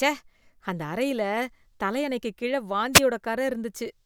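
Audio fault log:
2.93–3.01 s, wireless microphone noise hit: just after "தலையணைக்கு கீழ" a brief swish of static is heard as the FM radio link fades and receiver noise surges.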